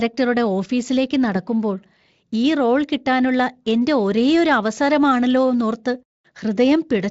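Listening to this speech recording, nothing stood out as a technical problem.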